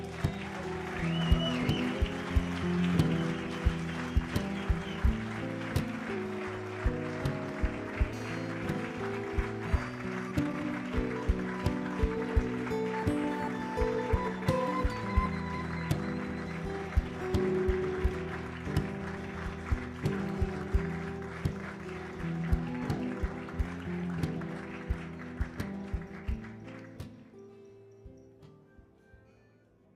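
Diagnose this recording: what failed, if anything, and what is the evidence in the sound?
Drift correction step, at the driver or buffer stage where two clocks are matched. From 1.95 to 2.96 s the sound runs about 6% fast and rises about 103 cents. From 6.16 to 8.09 s it runs about 6% slow and drops about 110 cents. From 23.64 to 24.14 s it jumps up again by 6% and 103 cents. Each time it snaps back. Speed and pitch move together by roughly a semitone, which points to a likely one-step resampling correction rather than a buffer trimming audio at constant pitch.

Skip ahead, in the network path or jitter buffer. At 9.75 to 9.77 s playback jumps forward with no gap filled, so about a second of audio is simply missing and the two sides are butted together. Unlike a dropout, there is no silence or concealment noise at the join. The content just leaps, and the overall delay shrinks by about the same second.

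Jitter buffer speed-up, in the receiver's buffer after a backlog. From 9.91 to 10.74 s the sound is hurried at 121% of normal speed, with about 0.2 s trimmed out. Milder runs follow from 17.11 to 18.07 s at 103% and from 18.99 to 19.94 s at 104%, each removing a few tens of milliseconds. Pitch stays put throughout, and that is what separates these from the drift steps.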